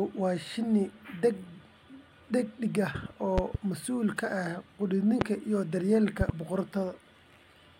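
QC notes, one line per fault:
3.38–3.57 s, loud pop: two sharp pops in quick succession between "dhedig ah" and "mas'uul ka", peaking about 15 dB above the speech. A sudden voltage pulse, likely from a plug, switch or static discharge, was added to the signal, and the speech carries on beneath it.
5.21–5.24 s, loud pop: a single brief pulse, about 20 dB above the speech, heard as one hard thump.
6.21–6.32 s, loud pop: another double pop, about 15 dB above the speech.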